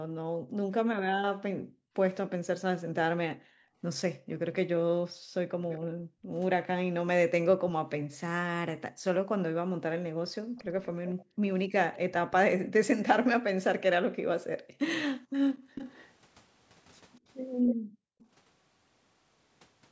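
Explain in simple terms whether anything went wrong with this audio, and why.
Two things go wrong here, and they're connected.

First, there's background gated by the echo canceller. Whenever the loudspeaker was playing, the call's echo canceller clamped the microphone down hard, so the room sound behind the speech nearly vanishes and then comes back. It happens between 0 and 6.33 s (about three seconds of dips in total), 8.91 to 12.7 s (about a second), 14.42 to 15.75 s (under a second) and 17.75 to 18.19 s.

Second, there's an echo leak. You can hear a faint, delayed copy of the speech trailing 243 ms behind the original, from 4.54 to 5.8 s, 10.57 to 12.36 s and 15.52 to 18.27 s. It's quiet in the first stretch and a bit more noticeable in the later two. The likely cause is that the echo canceller on the loudspeaker side didn't scrub out everything its microphone picked up, so part of the playback was sent back down the line.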